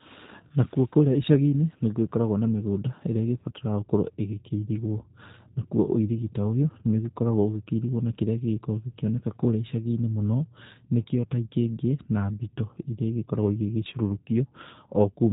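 From start to finish the speech sounds rough and faintly synthetic, with nothing above 3.8 kHz. This is plainly audible G.729 codec damage: every 10 ms frame is resynthesised from a vocal tract model, pitch prediction and sparse pulses, which fits an 8 kbit/s stream.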